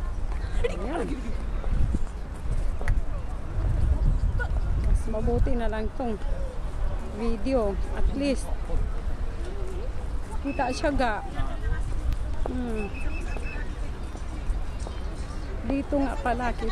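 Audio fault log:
12.13–16.13 s: periodic USB or driver dropouts, a tiny gap every 2.0 s, filled with silence and lasting a small fraction of a millisecond, heard as three regular ticks.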